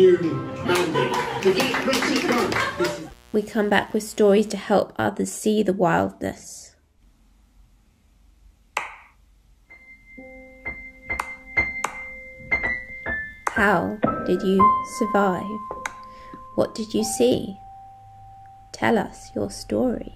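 The audio carries a mains buzz from 1.05 s to 4.63 s: a steady, raspy tone built on 60 Hz with harmonics reaching several kHz, roughly 30 dB below the programme. Switching spikes, twice per mains cycle, from a dimmer, rectifier or unshielded cable feed this interference.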